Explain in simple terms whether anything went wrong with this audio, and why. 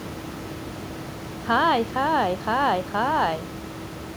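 Nothing stood out on listening to this speech; the background noise of the room stays well below the talking and is simply part of where it was recorded.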